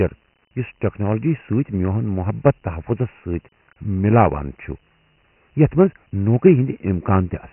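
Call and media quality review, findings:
Dialogic VOX ADPCM, whole clip. Nothing above 3 kHz, consistent with 6,000 samples/s, about 24 kbps at 4 bits per sample. Coarse step-size adaptation leaves heavy quantisation grit, a rough hiss riding on and trailing the speech throughout.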